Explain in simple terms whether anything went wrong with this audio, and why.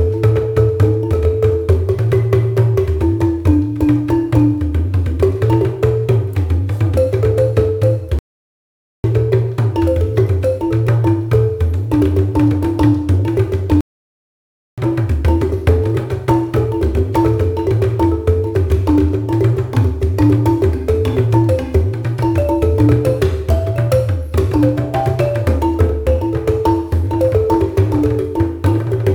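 Playback stall at 8.19 s and 13.81 s: the sound goes silent for 0.85 s, then 0.97 s, likely because the player ran out of data.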